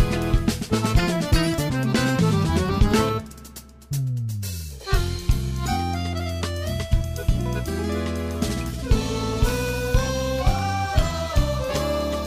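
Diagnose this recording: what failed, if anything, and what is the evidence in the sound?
Periodic USB or driver dropouts affect the driver and transfer stage. From 9.09 to 10.99 s, regular ticks repeat every 0.1 s, about twenty of them. A recurring background task stalls the audio path. Each stall swaps a fraction of a millisecond for silence.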